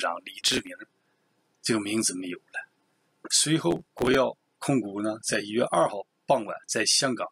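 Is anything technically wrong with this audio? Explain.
Yes. Processor overload crackle at 0.41 to 0.70 s and 3.71 to 4.15 s: dozens of very short buffers missed and skipped, heard as gritty tearing, with dense vertical broadband streaks on a spectrogram and jagged waveform breaks.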